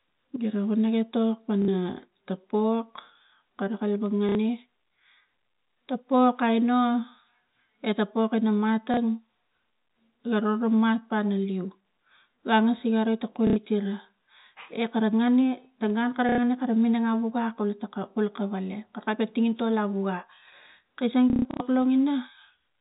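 Packet loss with the last packet repeated shows up at 1.62 s (after "wana etok"), 4.29 s, 8.94 s (after "eta pok ina"), 13.47 s, 16.29 s (after "ta gun kara") and 21.3 to 21.6 s, with gaps of 30 to 240 ms. The final burst has a longest run of 150 ms. Each loss replays the previous chunk, which fits 30 ms packets. So you get a robotic stutter buzzing near 33 Hz over the G.711 telephone band.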